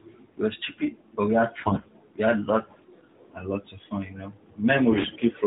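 A speech recording carried over the AMR narrowband mobile codec, with its 4 kHz ceiling and light coding, has two bursts of AMR bit errors: from 1.62 to 1.87 s, right after "stupid but we had", and from 4.92 to 5.18 s. Each lasts about a dozen 20 ms frames, and in both the voice turns hoarse, scratchy and gargly while keeping roughly its pitch and loudness. That is the sign of a weak radio link flipping around 7 percent of the less protected bits. The pulses and fine pitch, gain and spectral values are wrong, but the frames still decode. Lost frames would instead fade, mute or repeat.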